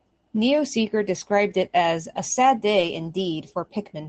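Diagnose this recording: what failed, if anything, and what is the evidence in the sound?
Network loss, patched by Opus: a lost packet rebuilt from error correction shows as brief rough, noisy spots at 1.81–1.83 s after "described it" and 2.77–2.83 s after "a sad". Low-bitrate backup copies filled both gaps, so nothing drops out.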